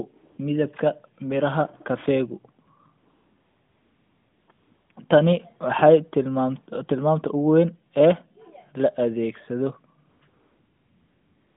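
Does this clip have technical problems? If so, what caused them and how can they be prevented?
Yes. AMR comfort noise fills the gaps at 0.16–0.38 s (just before "midibka beeraha kaeegu"), 2.66–2.68 s (just after it), 2.98–4.48 s, 4.52–4.90 s, 4.92–4.96 s, 10.10–10.22 s and 10.28–11.56 s. The sender's voice activity detector judged these stretches silent and stopped transmitting speech frames, so the receiver substituted synthetic noise built from a rough level and spectral shape. On a spectrogram these spans show as flat, featureless noise within the narrowband channel of about 150 Hz to 3.6 kHz, which fits the 12.2 kbps AMR-NB mode, with abrupt edges where real signal returns. On a waveform they appear as an even, low-level band. To prevent this, disable discontinuous transmission (DTX) or make the voice activity detector less aggressive.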